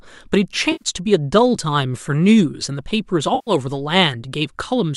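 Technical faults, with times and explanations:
0.72–0.83 s and 3.35–3.51 s: AAC frame loss with concealment. Gaps of about 90 ms and 120 ms are filled from the last good spectrum, giving smeared, noisy patches. The roughly 10 ms frame size points to low-delay AAC, likely AAC-ELD.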